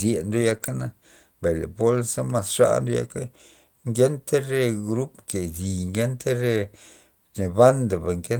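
Speech clip with packet loss early on. A lost packet rebuilt from error correction affects 0.41 to 0.55 s and 0.62 to 0.84 s. Lower-quality backup copies fill these stretches, so the sound turns rougher and noisier without gaps. Between them, a short concealed packet loss at 0.57 to 0.62 s replaces about 20 ms with extrapolated audio, causing a brief smear or wobble.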